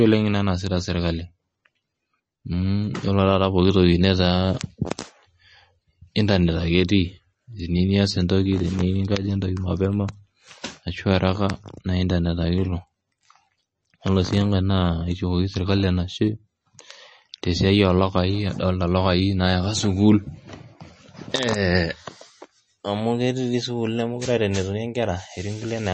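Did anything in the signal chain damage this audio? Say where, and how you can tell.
Yes: throughout, the speech sounds watery and swirly with nothing above 8.3 kHz, likely MP3 compression at the codec stage, which fits a low bitrate near 32 kbps.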